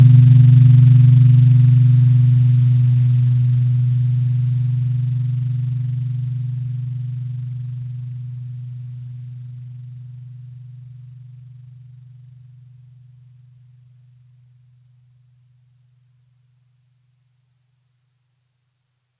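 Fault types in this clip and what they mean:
No faults can be heard in this audio.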